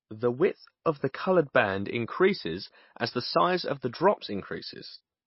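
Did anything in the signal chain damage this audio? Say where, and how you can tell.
Yes: MP3 compression damage runs throughout the clip, at the codec stage. The speech has no content above about 5.6 kHz, a hard ceiling where the encoder discarded the treble to save bits, and the s sounds turn watery and swirly as weak frequency lines drop in and out between frames. Consonant attacks are smeared. The damage is plainly audible, and the low cutoff fits a likely MP3 encode at a bitrate around 24 kbps.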